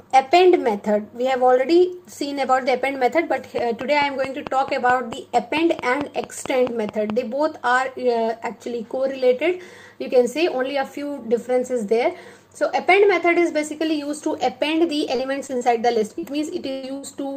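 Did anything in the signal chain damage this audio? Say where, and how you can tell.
Yes. There is a train of clicks from 3.59 to 7.11 s. It is a steady ticking at about 4.6 clicks per second, around fifteen in all. The clicks are evenly spaced and much alike in shape. They peak about 10 dB above the surrounding sound. The ticking continues through the quieter moments, so it sits on top of the audio rather than in it. This is likely interference picked up in the analogue wiring or a faltering interface.

Short concealed packet loss follows at 15.15, 15.47, 15.57 and 16.19 s. Each gap is brief, about 40 ms, except the one at 15.47 s, which is about 20 ms. You hear a small smear or wobble each time. The decoder had nothing to play, so it stretched the preceding sound to cover the hole. Then it blended back into the real audio. This points to the network stage, with packets arriving late or not at all.

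A burst of packet loss then hits twice, from 16.71 to 16.85 s and from 16.97 to 17.05 s. These gaps are longer, about 120 ms and 60 ms. There is no dropout to silence. Instead the last sound is held as a buzz or a fading hiss. The audio then resumes further along, with the stretch in between gone. Several consecutive packets were lost here, again at the network stage.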